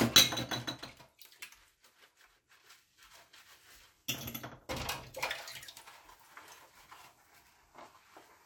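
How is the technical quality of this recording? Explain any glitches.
Listening closely, nothing in the audio stood out as a technical problem.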